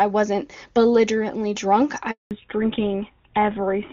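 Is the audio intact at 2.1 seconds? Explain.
No. At 2.11 s, just after "wasn't belligerently drunk", a handover gap occurs as the call switches networks and no speech frames arrive. The speech fades out within a few tens of milliseconds and stays silent until 2.31 s, losing 200 ms outright.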